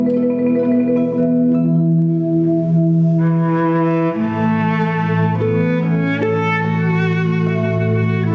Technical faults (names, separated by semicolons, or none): gain pumping